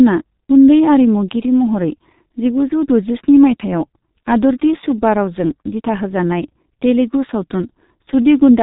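From start to finish the speech carries the heavy damage of the G.723.1 codec. Nothing reaches above 3.8 kHz, so the sound is muffled and the consonants smear together. The voice takes on a hoarse grain because the codec rebuilds it from a coarse model that it refreshes only every 30 ms, at a rate that fits roughly 6 kbit/s. A simple low-pass filter would dull the sound in the same way but leave its texture intact. The rough, synthetic hoarseness marks this as a codec fault rather than plain band-limiting.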